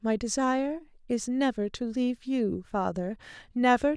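No technical faults are audible anywhere in the speech recording.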